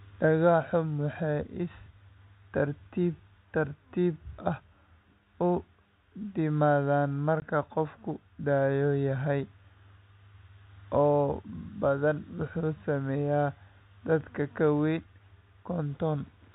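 Packet loss filled with silence occurs at 7.40 to 7.42 s: a 20 ms hole, which fits a single lost packet, where the receiver played nothing in place of the missing audio. The gap has abrupt edges within the telephone-band sound.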